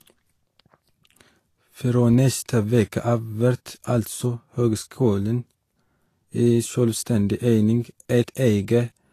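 Speech that carries nothing above 14.2 kHz throughout, likely low-bitrate audio saved at a high bitrate. A file that was only ever high-bitrate MP3 would not lose that top band.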